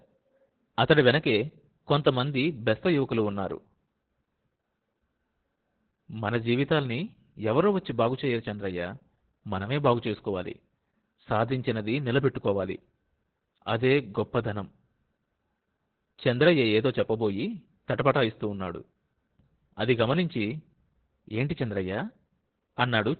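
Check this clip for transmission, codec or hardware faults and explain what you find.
There is one fault, present for the whole clip. Opus voice compression: throughout, the speech sounds muffled, hoarse and robotic, with heavy codec damage. The sound points to the SILK linear-prediction coder in narrowband mode, cutting everything above 4 kHz and coarsely coding the excitation, which fits a bitrate around 8 kbps.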